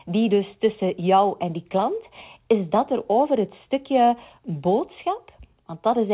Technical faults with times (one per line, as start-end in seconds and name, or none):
none